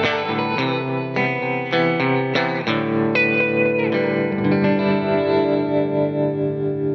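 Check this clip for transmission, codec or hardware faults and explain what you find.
No fault turns up anywhere in this music clip. There is nothing in it to point to or explain.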